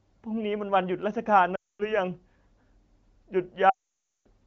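Speech carried over the AMR wideband (HD Voice) codec suffers lost AMR speech frames at 1.55–1.94 s and 3.70–4.27 s, where the decoder, missing frames that failed their checksum, repeats the last good pitch and vocal tract settings at falling gain. The sound drops to near silence within two frames, and it returns weak or rough. On a spectrogram, harmonics flatten into frozen horizontal streaks before going blank; the waveform's envelope tapers to flat.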